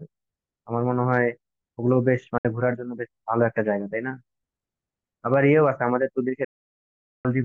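Speech with two digital broadcast dropouts: a 64 ms hole at 2.38 s and an 800 ms silence from 6.44 to 7.25 s. Each is a clean mute with a roughly 3 ms fade, not the noisy, gradual fade of an analogue signal loss, and the programme resumes later in time with the missing stretch gone.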